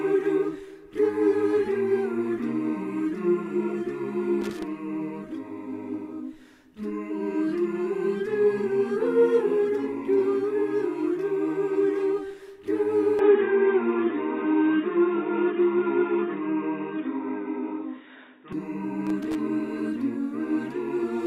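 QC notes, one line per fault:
4.41 to 4.63 s and 19.07 to 19.35 s, loose connector crackle: two short, irregular bursts of scratchy crackle. A worn or dirty contact is making and breaking as it shifts, chopping the signal.
13.19 to 18.53 s, input switched to a poorer device: the sound turns dull and boxy with nothing above 3.8 kHz, a small level shift, and faint new background noise well under the signal. There's no gap at the change. The likely cause is the input jumping to a narrower-band microphone or headset, which then switches back.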